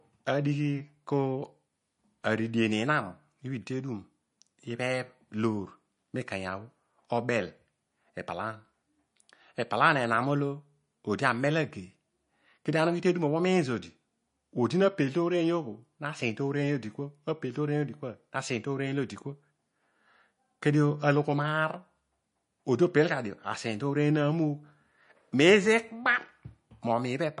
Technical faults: MP3 compression

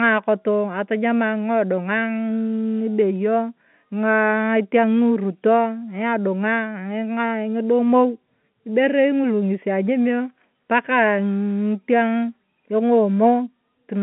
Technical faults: none

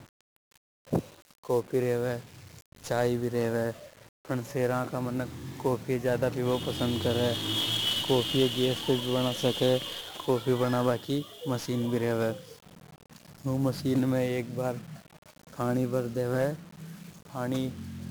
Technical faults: 1-bit DFPWM compression

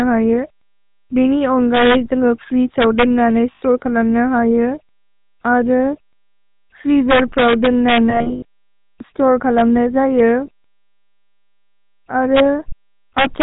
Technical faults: GSM full-rate codec; lost GSM frames

